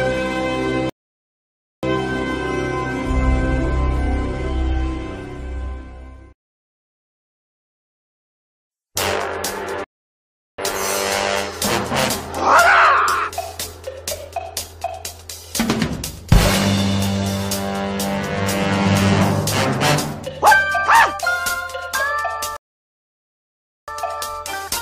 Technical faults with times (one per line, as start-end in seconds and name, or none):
0.89-1.83 rebuffering stall
9.84-10.58 rebuffering stall
22.57-23.88 rebuffering stall